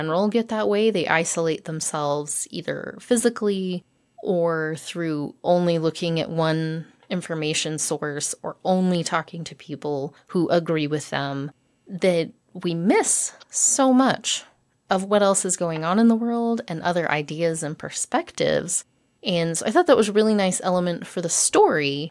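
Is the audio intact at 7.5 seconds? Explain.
Yes, at 7.5 seconds the speech plays through intact, with no dropout, click, distortion or other audible fault at that moment.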